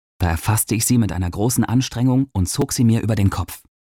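At 2.62 s, fresh audio failed to reach the output device in time, so a repeated buffer occurred: the last 5 ms block was played once more. Being so short, the doubled piece is heard as a click or brief buzz, and about 5 ms of sound is lost.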